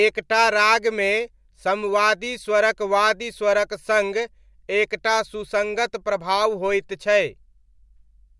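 Nothing in the speech stood out as a technical fault on listening.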